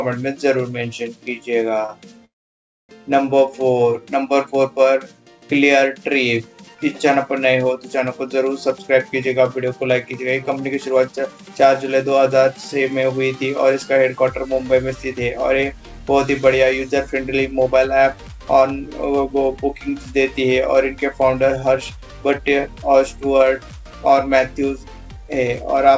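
A short stall from a late packet at 1.86–1.91 s holds the last sound about 28 ms too long, showing as a brief smeared, repeated stretch in the spectrogram. A call audio freeze follows at 2.25–2.91 s: a brief fading buzz, then about 0.61 s of near-silence, a flat gap in the waveform. Its likely cause is packets held up in transit emptying the jitter buffer. Jitter buffer speed-up runs at 8.96–11.85 s (104%, roughly 150 ms removed), 14.63–19.63 s (106%, roughly 300 ms), 21.43–22.83 s (106%, roughly 100 ms) and 25.10–25.93 s (107%, roughly 70 ms). The receiver is trimming pitch periods to cut delay, so the audio is hurried at unchanged pitch, with compressed timing but normal spectral shape. Throughout, the spectrogram shows nothing above 8 kHz, consistent with a G.722 call path at 64 kbps.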